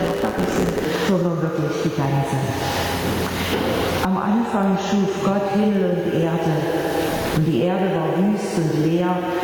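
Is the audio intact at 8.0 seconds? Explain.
No. At 8.0 seconds, as across the whole clip, the gain swings by roughly 25 dB, pulling loud and soft parts closer in level: gain pumping, likely from excessive gain with a fast limiter clamping each loud sound.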